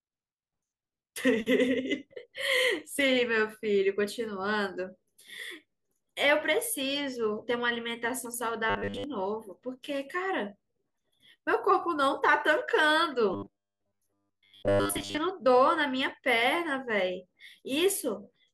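Speech with robotic sound from repeated short buffers at 8.70–9.04 s and 13.34–15.18 s. A fixed 100 Hz metallic buzz is heard, likely from a 10 ms chunk looping while most real audio is skipped. Codec warble would keep the true pitch.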